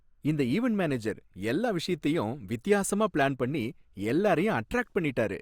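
There are no technical faults to describe in this speech recording.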